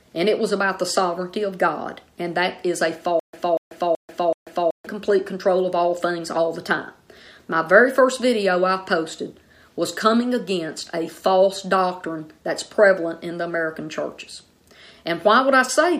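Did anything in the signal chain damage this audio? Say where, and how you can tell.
Yes. Between 3.20 and 4.87 s there is stutter with silent gaps at the playback or streaming stage. A 239 ms burst repeats four times, each followed by about 139 ms of digital silence, every 378 ms. A likely stalled player replaying its last fragment fits this, and the audio due in that span is lost.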